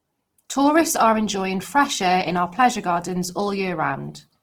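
From start to finish, the speech carries plainly audible Opus compression. Its likely cause is encoding in the music-oriented CELT mode at a rate near 16 kbps. The full bandwidth stays, with no early treble cut. But with so few bits, the encoder keeps each band's overall energy and fills the detail with folded copies of lower bands or noise. Vowels sound rough and grainy. Upper harmonics turn noisy rather than hollow or swirling.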